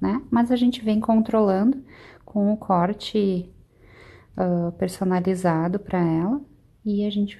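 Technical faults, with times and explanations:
No technical faults can be heard anywhere in the recording.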